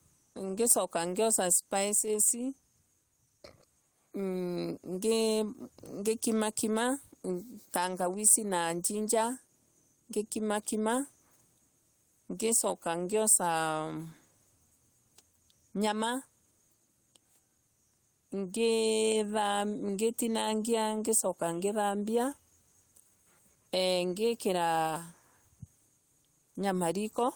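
The gain pumping runs right through this speech recording, from the first second to the last. Whenever the talker gets loud, the level gets yanked down by roughly 5 dB. The likely cause is input gain cranked too high, with a fast limiter or compressor clamping every peak, which leaves everything sounding squashed and flat in dynamics.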